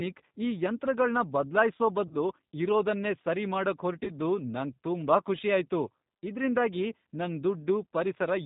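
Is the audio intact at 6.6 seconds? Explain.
No. At 6.6 seconds, as through the whole clip, the speech carries G.729 codec damage. The codec rebuilds each 10 ms frame from a vocal-tract filter, a pitch predictor and a few sparse pulses, which fits an 8 kbit/s G.729A stream. The speech sounds plainly rough and synthetic. On a spectrogram, energy stops at a hard ceiling near 4 kHz, and the harmonics look smeared and grainy rather than clean.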